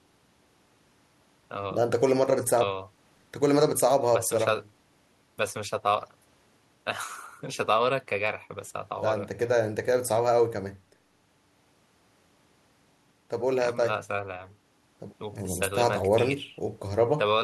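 No technical faults can be heard anywhere in the speech recording.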